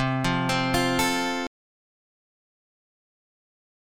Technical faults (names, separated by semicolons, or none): audio dropout to silence